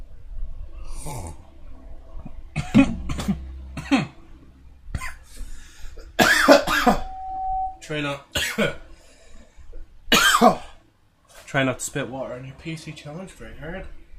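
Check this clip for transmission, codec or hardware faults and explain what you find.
One fault: loudspeaker feedback squeal. From 6.84 to 7.85 s, a 755 Hz tone swells over about 0.7 s. The microphone re-amplifies its own loudspeaker until the tone is roughly level with the sound.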